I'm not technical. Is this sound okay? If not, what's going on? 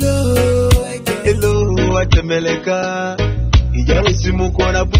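No. At about 1.52 seconds the quality suddenly drops, and it stays lower until the end. There is no gap or pause. The sound just turns duller and grainy. This is an adaptive stream at a lower bitrate. When the connection slows, the player quietly switches to a smaller, more squeezed version of the audio. Here that version keeps nothing above 6.3 kHz, so the crisp, bright detail is gone.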